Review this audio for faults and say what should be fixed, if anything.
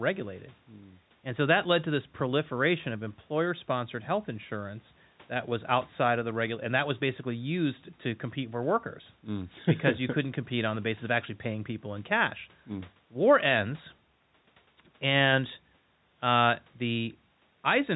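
Nothing here needs fixing: the speech comes through the call's microphone processing and G.711 telephone coding just as it should, with the usual phone-line ceiling of about 3.9 kHz and nothing wrong to chase down.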